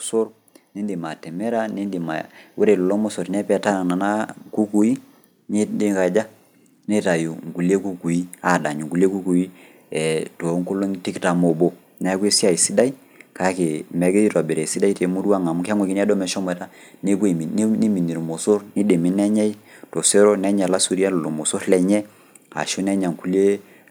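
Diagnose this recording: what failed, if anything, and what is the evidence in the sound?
The automatic gain rising happens at the call processing stage: from 0.74 to 4.29 s the speech and the background noise floor swell together by about 7 dB before "kukui neikaja". The AGC judged the input too quiet and ramped its gain slowly; a talker moving closer would raise the voice alone.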